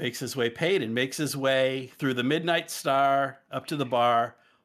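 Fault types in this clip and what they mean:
Nothing here stands out as a fault, so there's no type to list for this one.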